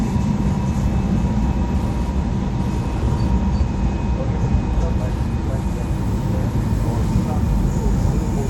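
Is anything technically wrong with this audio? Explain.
Yes. Wi-Fi interference runs through the whole clip. A Wi-Fi radio near the audio circuitry transmits a beacon every 102.4 ms, and the circuit rectifies those bursts of radio energy into audible pulses. The result is a steady, regular ticking at just under ten clicks per second, sitting well beneath the main sound, roughly 35 dB down.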